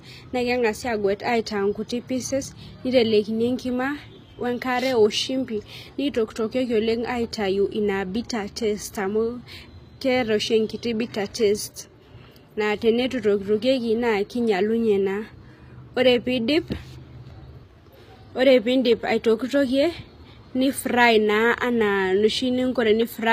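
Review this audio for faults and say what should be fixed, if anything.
The audio was likely passed through HE-AAC compression at a low bitrate, consistent with about 24 kbps, for the whole clip. The treble is rebuilt from copied lower bands rather than coded, so sibilants sound gritty and lispy, and nothing remains above 15.5 kHz. Encode at a higher bitrate with plain AAC rather than spectral band replication.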